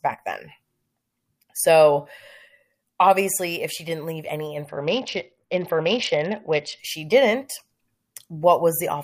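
A short speech clip that takes a quality dip from about 4.65 s to 6.79 s. That's a Bluetooth SBC bit pool drop: the top end goes dull and a gritty noise creeps in, which fits the link starving the encoder to roughly 61 kbps before it recovers.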